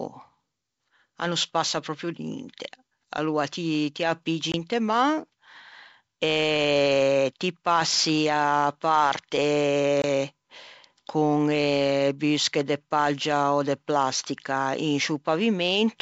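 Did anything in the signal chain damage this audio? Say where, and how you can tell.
Yes. Two short, hard-edged holes of silence cut into the speech at 4.52 to 4.55 s and again at 10.02 to 10.05 s, each about 20 ms of missing sound, roughly one packet. This is packet loss on an ADPCM call at the network stage, carried over the wideband G.722 coding, which itself sounds clear up to 7 kHz. The gaps were filled with silence, so the receiving decoder's adaptive predictor and step size drifted out of step with the sender's. That mismatch is why the sound briefly resumes slightly distorted before settling.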